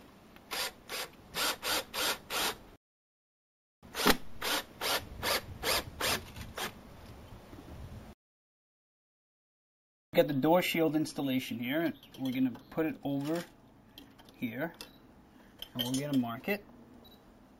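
Sample-and-hold upsampling from 16 kHz to 48 kHz causes imaging throughout: mirrored spectral copies from 8 to 16 kHz, about 14 dB down, add a metallic fizz.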